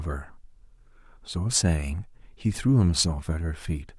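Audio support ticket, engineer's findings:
No faults found in this speech clip; nothing to report for the ticket.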